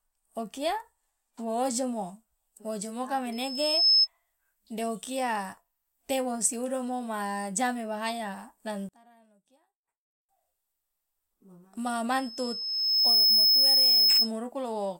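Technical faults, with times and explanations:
3.32–4.08 s, loudspeaker feedback squeal: a steady 5.2 kHz tone swells over about half a second to roughly 10 dB above the speech, then stops. The microphone is hearing its own loudspeaker, and at 5.2 kHz the loop gain exceeds one, so that single frequency keeps reinforcing itself.
8.89–10.29 s, one channel inverted: the speech suddenly drops by about 26 dB, leaving a faint residue for 1.4 s. The likely cause is one stereo channel with reversed polarity: when the channels are summed to mono, the centred speech common to both cancels, and only the small difference between them remains.
12.12–14.32 s, loudspeaker feedback squeal: the same 5.2 kHz howl returns, building more slowly, over about a second, to roughly 10 dB above the speech and lasting 2.2 s in all. The same acoustic loop between loudspeaker and microphone is again running above unity gain at that frequency.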